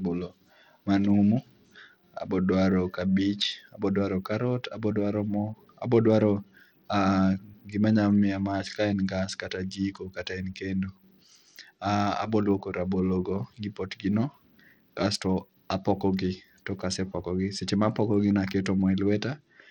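From start to finish the treble flickers and thins out, with a gritty, grainy noise and aliasing riding on the speech. This is likely Bluetooth SBC compression at a low setting, consistent with roughly 80 kbps, starving the upper sub-bands of bits and quantising the rest coarsely.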